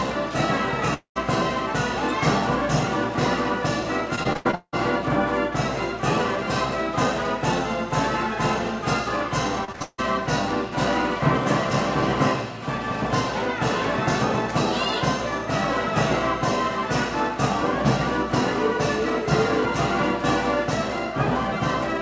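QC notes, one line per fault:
0.94–1.18 s, long network dropout (likely cause): about 220 ms of audio never arrives. The receiver extends the last sound as a fading buzz or hiss, which decays into roughly 110 ms of near-silence. The sound then resumes further on with the lost section absent.
4.16–4.75 s and 9.65–10.03 s, repeated packet loss (robotic sound): six gaps in the first span and four in the second, longest 178 ms and 156 ms. Each hole is patched by continuing the previous sound, covering about 56% and 70% of each span. The result is choppy audio with pieces missing.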